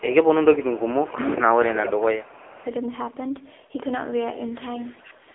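From start to finish the speech carries AMR narrowband mobile codec damage, and it is heavy. Nothing above 3.6 kHz gets through, and the low end thins out below about 300 Hz. The codec rebuilds the voice from a vocal-tract model and a few pulses per short frame. At this rate, which fits the 6.7 kbps mode, too few bits carry it. So the voice turns buzzy, rough and synthetic.

From 2.51 to 2.69 s an echo leak appears. A very faint copy of the voice returns about 0.42 s late, far below the direct speech. It sounds like a brief ghost behind the talker. The likely cause is a far-end loudspeaker whose echo canceller let some of its own playback back into the microphone and the call.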